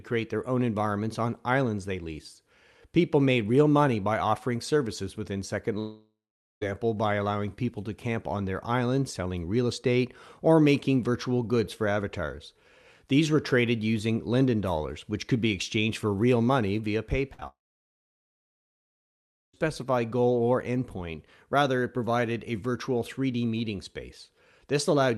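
From 5.79 to 6.63 s the sound stops arriving, most likely a long network dropout. For roughly 0.8 s nothing new reaches the receiver. It stretches the last sound into a tail that fades, and the final 0.45 s is near-silence. Speech returns at "by allowing people to", with the lost stretch gone. On a spectrogram, a smeared, flattened band decays into an empty gap. The waveform shows a shrinking envelope and then a flat line.

Right after "for real money via", a burst of packet loss runs from 17.33 to 17.40 s, taking out about 60 ms of audio. The receiver continues the last sound and turns it down over 50 ms, and the speech resumes further on. A spectrogram shows the last sound's spectrum held and fading in place of normal movement. The waveform has a sagging amplitude.

Immediately after it, from 17.40 to 17.43 s, a short concealed packet loss drops about 20 ms. The decoder bridges the hole with a continuation of the preceding sound and blends back, which comes across as a brief smear or wobble. 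On a spectrogram it appears as a thin blurred sliver. The waveform shows a small irregular join.

A second long network dropout, likely, follows from 17.47 to 19.55 s. About 2 s of audio is lost, and the decoder's fill dies away almost at once, leaving nearly 2 s of silence or low steady noise. The spectrogram is a wide blank block, and the waveform is a long flat stretch before the sound resumes. Throughout, the Opus call path limits the spectrum, with energy ending near 12 kHz.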